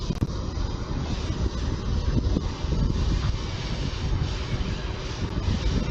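A tiny skip at 2.91 s: overlap between stream segments, where overlapping segment timestamps made the player trim about 11 ms of sound, jumping the waveform.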